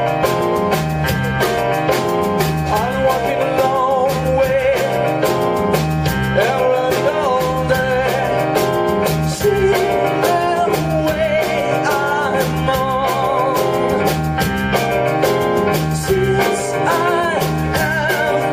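Nothing here stands out as a technical problem; the audio runs along without any dropouts, glitches or other faults to point to.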